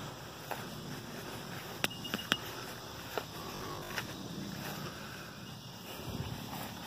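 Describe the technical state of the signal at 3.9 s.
At 3.9 s the signal is in the last stretch of robotic sound from repeated short buffers, running from 3.56 to 3.94 s. A 20 ms chunk was likely looped while about half the real audio was skipped, imposing a rigid, metallic 50 Hz buzz. The waveform shows identical repeating blocks, and the spectrogram shows evenly spaced 50 Hz harmonic lines.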